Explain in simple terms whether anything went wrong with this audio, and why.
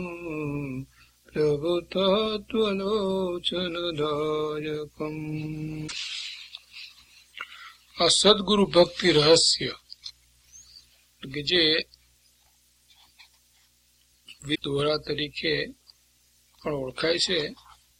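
Two short glitches, at 5.84 to 5.93 s and 14.51 to 14.59 s, come from damaged data in a compressed stream. Bits of the file got corrupted there, so the decoder stumbled, lost its place, and had to hunt for the next good chunk.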